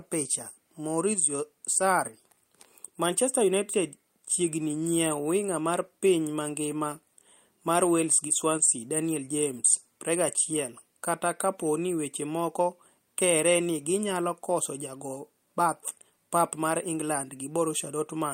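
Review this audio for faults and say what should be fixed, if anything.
No faults turn up anywhere in this speech recording. Nothing needs fixing, and there is nothing to prevent.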